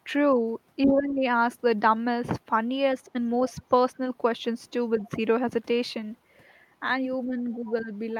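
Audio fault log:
0.85–1.23 s, 3.13–3.18 s, 4.98–5.07 s, 7.25–7.36 s and 7.61–7.92 s: speech suppressed in double talk. The talker's level sags while the far end also speaks, deepest by about 15 dB in the first stretch and about 10 dB in the last, only about 5 dB in the short ones. The likely cause is the echo canceller treating overlapping talk as echo and turning everything down.
3.48–3.62 s and 5.01–5.09 s: other side's voice leaking through. Brief, faint scraps of a second voice, roughly 30 dB below the talker, surface under the speech. The likely cause is the loudspeaker playback reaching the microphone without being fully cancelled. The second scrap coincides with a suppression dip.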